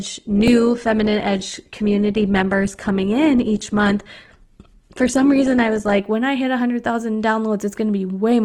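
Adaptive stream starting at a low bitrate runs from the start of this speech clip to 6.0 s, just before "when I hit". The player opened on a thin, heavily compressed version to begin quickly, so the treble is dull or synthetic, with nothing above 12.1 kHz, and codec smearing is stronger. Once it had gauged the connection it switched up, and the sound turns suddenly fuller and cleaner, consistent with Opus at far higher quality, with no gap. A repeated buffer occurs at 0.48 s. New audio arrived late, so the device replayed its last block twice more, joined hard each time. The block is so short, which fits a 64-sample buffer of about 1.3 ms, that the repeats come out as a click or tiny buzz rather than a stutter, and practically no audio is lost.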